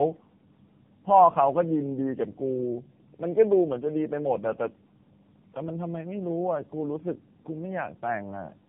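Tandem speech coding runs through the whole recording: the call appears to have crossed several networks, being decoded and re-encoded at each hand-off, which points to three low-rate speech codecs in a row ending in AMR-NB. Each pass compounds the last, leaving the speech rough, muffled and warbly, with nothing above 3.8 kHz.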